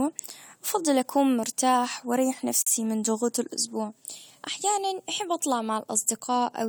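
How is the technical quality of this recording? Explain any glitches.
The speech has one glitch: a gap at a join of encoded pieces from 2.62 to 2.67 s, right after "بفضل اكون مرتاح واريح" and before "من ضغوط الاسبوع أحيانًا". Two separately encoded pieces were joined without trimming the encoder's start-up delay and end padding. The result is a sudden hole of about 47 ms with smeared edges, after which the speech resumes where it stopped.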